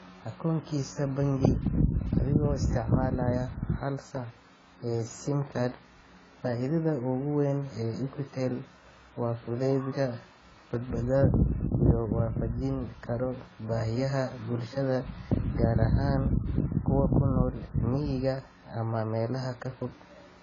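From start to finish the speech sounds dull and smeared, with nothing above 7.7 kHz and a warbly, fizzy edge on sibilants and held vowels. That's likely heavy AAC compression, with the encoder starving the spectrum in a way that fits a bitrate down near 16 kbps.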